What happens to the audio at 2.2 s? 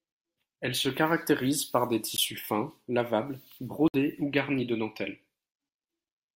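At 2.17 s the speech drops into a block of digital silence lasting about 15 ms. For that instant the output held zeros, as if the program failed to fill its buffer in time, and the signal cuts out and back with no fade. At this length it is heard as a tick rather than a hole. On a waveform it shows as a flat line with abrupt edges. A spectrogram shows a thin blank column.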